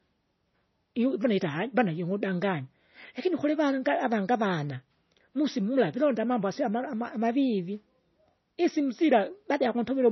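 MP3 compression runs through the whole clip, and the heavy damage fits a low bitrate of around 24 kbps. The speech has nothing above 6 kHz, a hard treble cut that dulls s sounds. The likely cause is an encoder starved of bits, which drops the top band entirely and zeroes weak frequency lines that flicker on and off between frames. That leaves the speech watery and swirling, with smeared consonant onsets.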